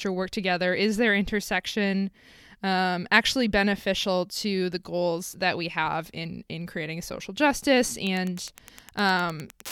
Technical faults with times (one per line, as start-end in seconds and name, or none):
8.05-9.72 Wi-Fi interference